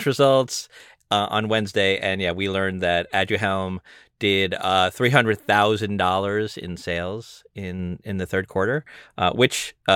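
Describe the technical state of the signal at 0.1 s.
At 0.1 s the speech signal is intact, with no technical fault present at that moment.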